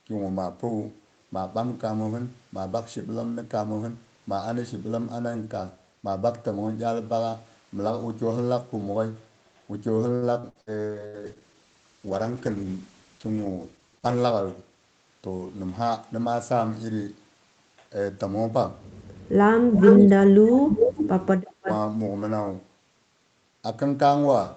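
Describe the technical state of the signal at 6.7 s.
At 6.7 s the speech is intact, with no fault to be heard; the band stops at about 8 kHz, as expected from the call's microphone processing and the Opus codec on its path.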